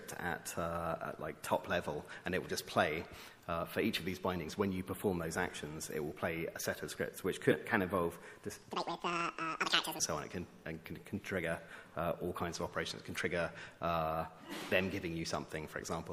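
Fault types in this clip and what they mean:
MP3 compression: Throughout, the sound is watery and swirly, as weak frequency lines flicker on and off between frames. The plainly audible damage likely comes from MP3 encoding at a bitrate around 64 kbps.
Corrupt frame decoded: At 7.51 to 7.54 s a short glitch peaking around -15 dBFS cuts in. A damaged compressed frame, about one frame long, was decoded anyway, so misread gains and codes scattered energy onto frequencies that don't belong there.
Section at the wrong speed: From 8.72 to 9.99 s the audio suddenly turns high and hurried, running at 1.98 times normal speed with pitch raised by around ten semitones. This is likely playback against the wrong clock, shifting speed and pitch together.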